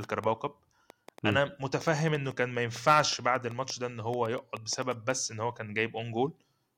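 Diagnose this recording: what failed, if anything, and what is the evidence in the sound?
A train of clicks runs through the speech from 0.04 to 5.11 s. About thirty similar pulses arrive unevenly, near 5.5 per second, peaking about 5 dB above the speech. The likely cause is interference pickup in the analogue wiring or a faulty connection or power supply injecting pulses.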